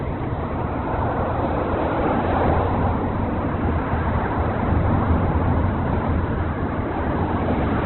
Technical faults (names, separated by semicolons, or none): Opus compression